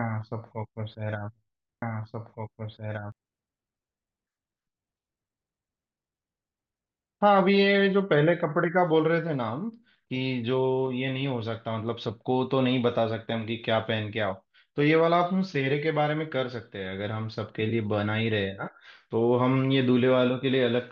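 From 1.82 to 3.12 s there's a doubled audio track: an equally loud copy trails roughly two seconds behind, likely from a slower second capture path.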